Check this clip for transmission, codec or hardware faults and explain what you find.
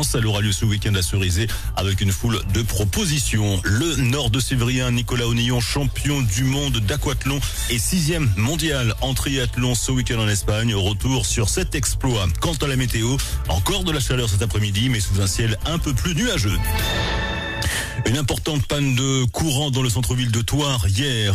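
No transmission or hardware faults.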